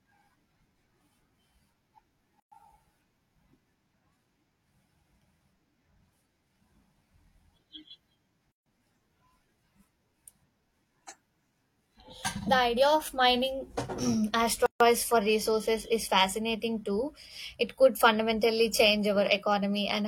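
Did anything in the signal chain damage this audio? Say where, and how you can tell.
Yes. At the codec stage, silences of 118 to 144 ms break the speech every 6 s: 2.40–2.52 s, 8.52–8.66 s and 14.66–14.80 s, just before "for resources is fascinating". These are gaps at joins of encoded pieces, where encoder start delay and end-frame padding were left untrimmed.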